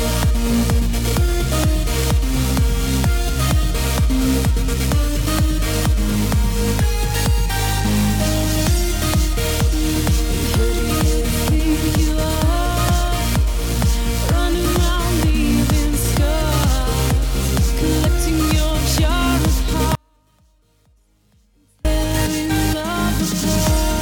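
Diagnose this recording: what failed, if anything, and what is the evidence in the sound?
An audio dropout to a faint residue runs from 19.95 s to 21.85 s, about 1.9 s in all. The sound cuts off abruptly mid-flow and returns just as suddenly. Throughout the gap only a faint leak of the signal remains, roughly 40 dB below its normal level. The likely cause is an intermittent analogue connection that briefly lost the wanted signal while the path after the break stayed live. On a waveform this shows as a sharp-edged collapse to a thin trace. A spectrogram shows a ghostly, dim band across the same span.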